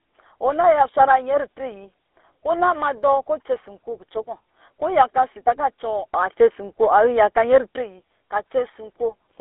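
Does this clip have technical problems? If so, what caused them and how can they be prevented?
Yes. The whole clip carries GSM full-rate codec damage, and it is plainly audible. The speech has a buzzy, gravelly roughness from start to finish. This codec models the vocal tract and drives it with a sparse pulse train, keeping only every third excitation sample, which fits a 13 kbps GSM link. The band runs from about 300 Hz to 3.6 kHz, so the highs are gone and the low end is thin. To prevent it, record locally or use a wideband codec instead of a GSM call path.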